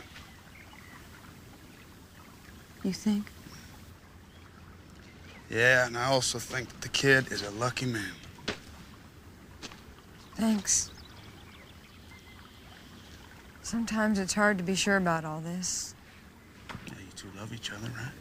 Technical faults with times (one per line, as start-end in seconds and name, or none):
15.17-17.78 sudden gain jump